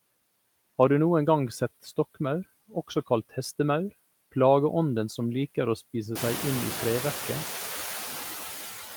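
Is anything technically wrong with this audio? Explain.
Yes, there are noise suppressor artifacts the whole way through: the suppressor pulls steady background down by about 12 dB between words, so the noise pumps back up under the speech. That's more exposed after the room noise jumps around 6 seconds to sit only about 10 dB under the speech.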